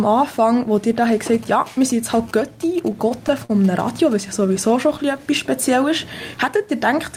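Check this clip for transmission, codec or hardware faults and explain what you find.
Three faults are audible: one from hardware interference and two from the receiver's jitter buffer.

GSM signalling bursts, 1.34 to 4.13 s: a nearby 2G phone exchanging signalling sends clusters of radio bursts, and the audio circuitry rectifies them into sound. The result is a galloping pattern of ticks and short buzzes at 217 Hz, sitting roughly 20 dB below the programme.

Repeated stalls (stutter), 2.56 to 3.51 s: packets kept arriving late, so the buffer ran dry six times. Each time the receiver prolonged the last sound, for 86 ms in total, with the longest gap 42 ms. Nothing is lost, but the sound drags and hiccups.

Jitter buffer slow-down, 4.40 to 5.24 s: with its reserve running low, the receiver rebuilt it by repeating tiny pitch-period-length slices, adding 86 ms. Playback runs at about 91% speed with unchanged pitch, so sounds come out drawn-out and slightly stretched.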